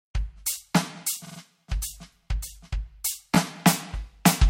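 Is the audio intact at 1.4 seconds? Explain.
No. The music is disrupted from 1.24 to 1.38 s by repeated frames. A 46.4 ms block of compressed audio plays three extra times in a row, which fits a run of two frames being sent or written more than once. The decoder replays the same slice each time. It sounds like a rapid stutter. The passage runs about 139 ms longer.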